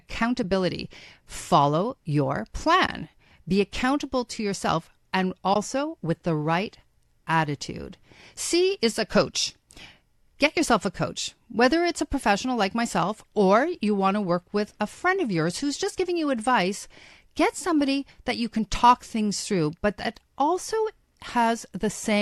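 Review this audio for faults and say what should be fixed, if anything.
AAC frame loss with muting at 0.43 s, 2.87 to 2.89 s, 5.54 to 5.56 s (after "accountable to yourself and", before "with the right attitude") and 20.39 s (after "things through but that"). Each is a short, soft-edged dip in level. The decoder received no data for those frames, zeroed their spectrum, and the overlapping windows faded the sound out and back in. The 10 ms dips at 0.43 s and 20.39 s fit one lost frame, and the 20 ms dips fit two. A light coding texture is likely from low-delay AAC compression. To prevent the dropouts, protect the stream against packet loss, for example with forward error correction or retransmission, and use a decoder with proper concealment rather than muting.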